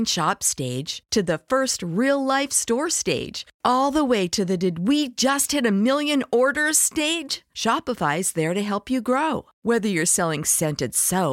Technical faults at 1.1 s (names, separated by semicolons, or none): none